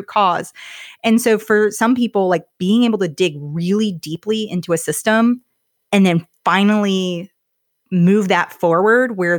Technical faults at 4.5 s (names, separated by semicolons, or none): none